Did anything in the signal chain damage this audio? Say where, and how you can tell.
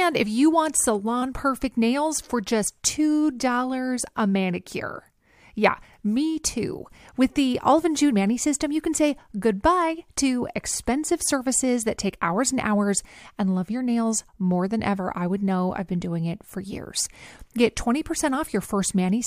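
Yes. The damage is at the codec stage, as compressed frames skipped. The speech jumps forward abruptly at 2.65 s and again between 17.05 and 17.07 s, each time losing around 20 ms of audio. The missing frames were either absent from the stream or rejected as corrupt, so playback simply resumes at the next good frame.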